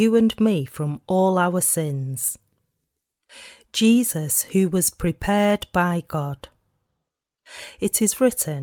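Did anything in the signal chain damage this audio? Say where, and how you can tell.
Yes. Clock drift between sender and receiver shows at the network jitter buffer. The sender's clock runs roughly 3% slow against the receiver's. The buffer keeps draining, so small timing hiccups recur through the whole speech clip at uneven intervals.

Repeated timing corrections run from 0.42 to 8.51 s. The receiver keeps repeating short pieces to cover the slow supply. The tempo sits at 98% of normal. About a fifth of a second is added in total, heard as slight, unevenly spaced stumbles.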